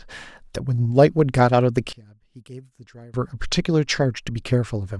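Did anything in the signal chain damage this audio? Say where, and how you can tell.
Yes. Between 1.93 and 3.14 s the speech drops by about 23 dB to a faint residue, then snaps back. That's the signature of one channel inverted, likely a polarity flip in the wiring, so the centred voice cancels when summed to mono.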